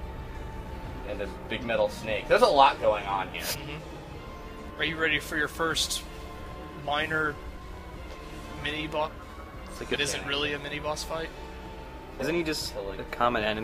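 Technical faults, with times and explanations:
3.51–3.55, 4.67–4.71, 9.03–9.08, 9.92–9.96 and 12.19–12.23 s, compressed frames skipped: the audio jumps ahead by roughly 0.2, 0.7, 0.7, 1 and 0.5 s, consistent with whole 46 ms codec frames going missing.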